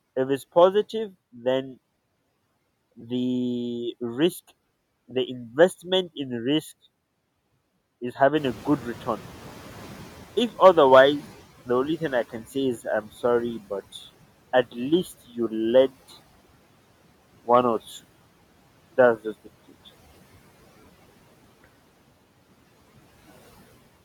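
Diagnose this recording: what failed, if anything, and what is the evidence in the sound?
At about 8.4 s the background noise jumps up and comes through the speech with less reduction, then sinks steadily until it settles at 13.83 s. That is the noise suppressor catching up, a call-processing fault. The room noise rises by about 15 dB at roughly 8.5 s, and the suppressor's noise estimate trails that step, so the new noise is treated as signal at first. The estimate takes about 5.5 s to adapt, and only then is the noise cut by about 15 dB.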